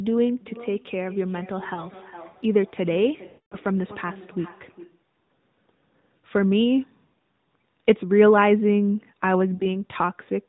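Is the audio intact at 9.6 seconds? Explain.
No. From 9.54 to 9.67 s the speech smears and fades, then returns weak: lost AMR speech frames, about 60 ms (likely three 20 ms frames), concealed by repeating the last good parameters at falling gain.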